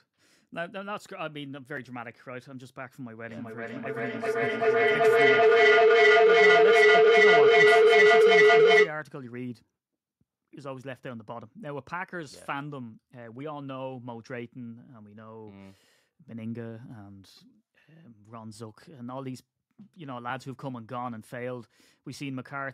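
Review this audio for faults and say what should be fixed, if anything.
A feedback howl runs from 3.28 s to 8.99 s. Two devices in the same room are on the call, so sound from one loudspeaker reaches the other microphone and returns louder on each pass. The repeats build rather than decay, narrowing to a tone around 400 Hz that pulses roughly every 0.4 s, the loop's round-trip delay. At its peak it sits about 17 dB above the speech. To prevent it, mute or leave the call on all but one device in the room.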